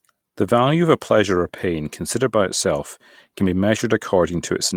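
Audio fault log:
1.35 to 1.37 s and 3.39 to 3.49 s, lost packet rebuilt from error correction: packets went missing (20 ms, then 60 ms, likely one packet and then three), but the following packets carried low-bitrate copies that the decoder played instead. No gap is heard, but those stretches sound rougher and noisier.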